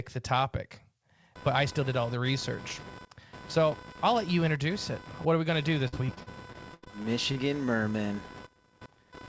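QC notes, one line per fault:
1.35–9.28 s: computer activity noise starts right after "the topic" and runs to the end, a buzzing chirp pulsing around 500 Hz, roughly 20 dB below the speech. Its rhythm follows machine load on the shared ground, not the voice, unlike steady mains hum.
5.88–7.38 s: repeated packet loss (robotic sound). Many short gaps, the longest 83 ms, are bridged by stretching the last sound. About a quarter of this 1.5 s stretch is patched, giving choppy speech with pieces missing rather than one clean dropout.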